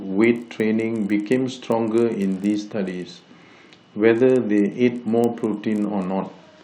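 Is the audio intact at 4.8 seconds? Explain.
No. A resampler restarted on every block runs through the whole clip, including 4.8 s. Each 20 ms block of the 16 kHz to 48 kHz conversion is converted without its neighbours' samples. This leaves small errors at every edge, heard as a 50 Hz tick-buzz under the speech.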